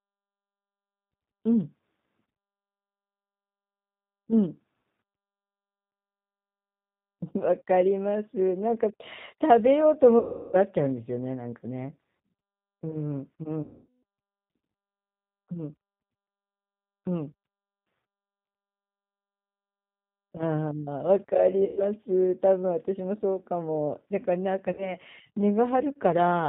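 It's a speech recording that has come through the G.729 codec at 8 kbit/s the whole way, and the damage is plainly audible. Nothing above 4 kHz survives, so it sounds dull and band-limited, and because the codec rebuilds the voice from a vocal tract model plus a handful of pulses per frame, there's a rough, slightly synthetic edge to everything. On top of that there are four spots of VoIP packet loss concealed by the speech codec: 10.19 to 10.57 s, 13.63 to 13.86 s, 21.65 to 21.83 s, and 24.72 to 24.95 s. At each one the decoder has no new data, so it keeps stretching its last pitch and filter while turning the gain down. That gives a smeared buzzy tone or coloured noise that fades out. The first two gaps are the longest, and the last two are short blips. Since each frame is built on the one before it, the voice comes back sounding weak or a bit off for a moment after each gap.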